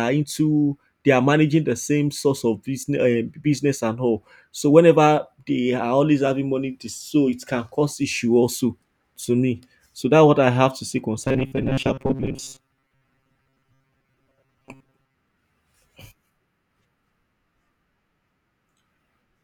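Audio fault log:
11.23–15.18 s, robotic sound from repeated short buffers: the speech turns into a stiff metallic buzz pinned near 134 Hz, still loosely following the words. Likely a roughly 7.5 ms chunk looped while fresh audio arrived too seldom, skipping most of the real signal.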